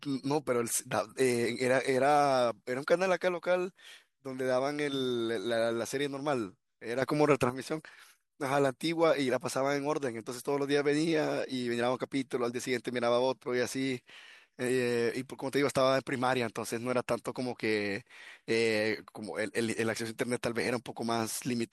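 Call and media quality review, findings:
Sudden gain jump, 7.02 to 7.50 s: speech and background noise step up together by about 8 dB with no ramp, then drop back. Likely cause: gain stage or AGC applying a new digital gain value instantly.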